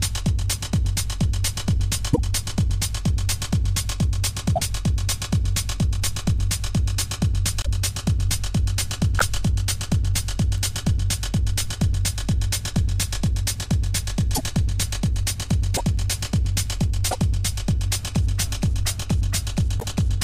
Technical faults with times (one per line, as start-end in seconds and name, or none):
2.12-2.19 broken MP3 bit reservoir
4.55-4.61 broken MP3 bit reservoir
7.62-7.67 broken MP3 bit reservoir
9.18-9.22 broken MP3 bit reservoir
14.34-14.40 broken MP3 bit reservoir
15.76-15.81 broken MP3 bit reservoir
17.10-17.15 broken MP3 bit reservoir
19.79-19.84 broken MP3 bit reservoir